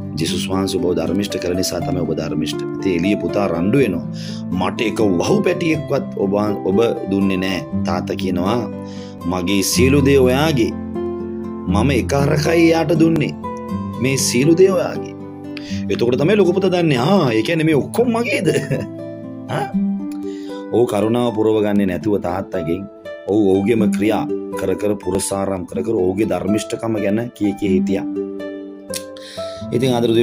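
The audio has an overlap between stream segments: at 5.20, 9.18, 13.16 and 25.15 s a few milliseconds are trimmed where segment timestamps overlap, so the waveform jumps and a brief click or skip is heard. The spacing follows 4-second segment boundaries.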